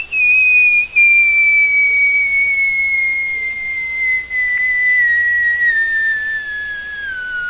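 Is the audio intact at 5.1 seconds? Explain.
No. From 4.81 to 6.46 s a jitter buffer slow-down stretches the sound to about 88% speed, adding about 214 ms as the receiver repeats short periods to rebuild its reserve. Pitch stays unchanged, unlike a resampling slowdown, which would drop it.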